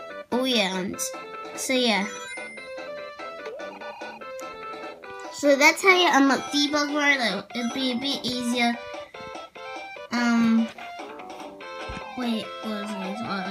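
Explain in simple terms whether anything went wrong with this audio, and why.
Nothing went wrong with this audio that a listener can pick out. No glitch or sudden change stands out at any point in the recording.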